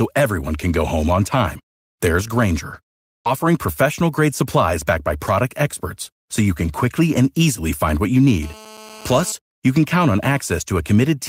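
Right after "home on time there's", at 2.73 to 2.75 s, there's a lost packet rebuilt from error correction. The decoder played a low-bitrate backup copy, so there's no gap, just 20 ms of rougher, noisier sound. Then come two short concealed packet losses, at 3.01 to 3.07 s and 3.13 to 3.16 s. Each hole was papered over by stretching the previous sound, giving a quick smear or wobble. Straight after, from 3.18 to 3.27 s, a burst of packet loss hits. About 70 ms gets filled with the last sound fading to a buzz or hiss, then it jumps ahead to "professional grade supplies backed" with 60 ms missing. The final 20 ms of that stretch, 3.25 to 3.27 s, is again rebuilt from the error-correction copy, so it's a bit grainy. Between "easily find what you" and "you can count on", at 8.43 to 9.32 s, there's GSM phone buzz. A nearby handset in a call pulses 217 times a second and the circuitry rectifies it into a steady, raspy 217 Hz buzz with lots of harmonics, sitting about 21 dB under the speech.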